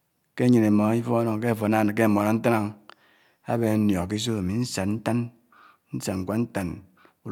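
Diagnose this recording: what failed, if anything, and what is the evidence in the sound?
Nothing failed in this recording.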